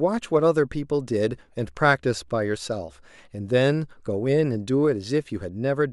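No technical faults can be heard anywhere in the recording.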